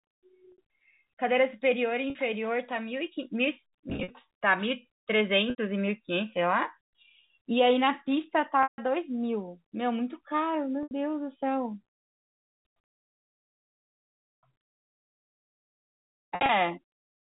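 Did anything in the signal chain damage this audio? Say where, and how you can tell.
Yes, it's network damage: packet loss with pitch repetition, seven dropouts in this G.711 telephone call. They sit at 0.52 s (60 ms), 2.10 s (50 ms), 3.90 to 4.10 s (130 ms in short bursts), 5.50 s (80 ms), 8.63 s (150 ms), 10.83 s (80 ms) and 16.35 to 16.49 s (100 ms in bursts). The receiver loops the last pitch period, so the brief gaps come across as a held, buzzy tone, while the longer ones fade to silence before the speech cross-fades back in. The gap lengths fit 10 ms packets.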